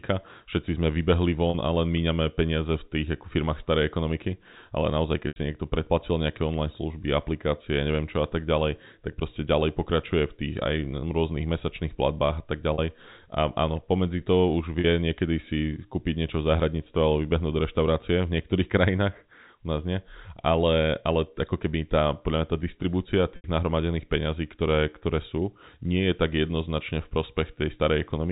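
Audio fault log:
1.5, 5.28, 12.74, 14.8 and 23.36 s: packet loss with pitch repetition. 40 ms gaps (80 ms at 5.28 and 23.36 s) are patched by repeating the last pitch period, so you hear a brief buzzy held tone, while the 80 ms ones fade into silence before the speech returns. The one at 14.8 s comes right after "pomedzi to už".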